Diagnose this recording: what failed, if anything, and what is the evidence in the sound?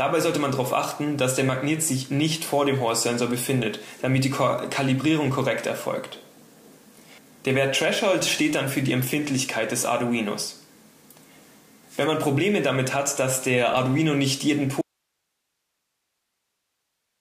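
Audio dropout to a faint residue at 14.82 s: the signal cuts off abruptly and never returns, leaving only hiss roughly 55 dB down. The live hiss, not digital silence or a fade, points to a likely break in the analogue wiring ahead of a still-running input.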